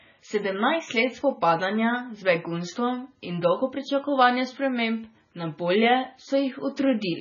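From start to finish the speech carries heavy MP3 compression damage, likely from encoding at a very low bitrate, around 16 kbps. Nothing survives above 7 kHz, so s sounds lose their hiss and turn dull. Weak frequency lines drop in and out between frames, giving a watery, swirling texture with metallic chirps, and consonant onsets smear. A spectrogram shows a flat ceiling at 7 kHz and scattered, flickering holes in the energy below it.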